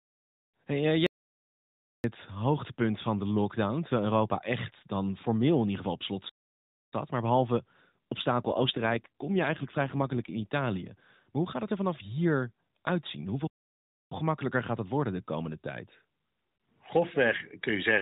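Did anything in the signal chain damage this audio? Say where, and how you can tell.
Yes. The first fault is an audio dropout to silence, from 1.07 to 2.04 s. The speech stops in mid-flow and returns just under a second later. The gap is silent, with no room tone at all. The stage is likely the input side, a lost device link or converter feed, while the recorder kept writing silence. Whatever was spoken in that stretch is gone.

The second fault is an AMR rate drop, from 8.44 to 10.44 s, at the network and codec stage. The band stays narrow throughout, cut off at 4 kHz as on any AMR-NB call, and there is no gap. But the speech turns buzzier and more synthetic for those two seconds. That roughness fits the link forcing the codec down from 12.2 kbps to about 5.9 kbps, then back up.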